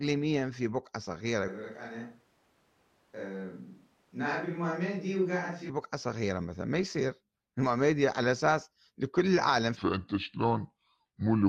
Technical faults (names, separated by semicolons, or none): switch to a distant microphone; section at the wrong speed